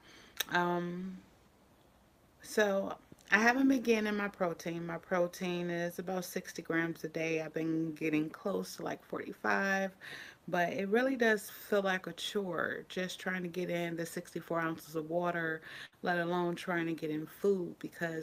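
At about 15.85 s there's a burst of packet loss that runs to roughly 15.95 s. A short run of packets never showed up in time, so the receiver papered over the hole by stretching the last bit of sound it had for about 67 ms and letting it fade, which you hear as a brief smeared, dying tail. When the audio picks up again, around 60 ms of material has simply gone missing.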